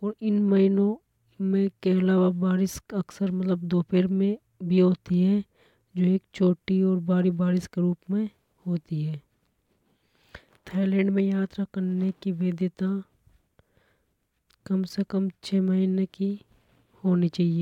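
No technical faults are audible.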